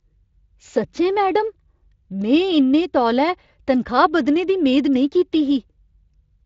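No technical faults are audible.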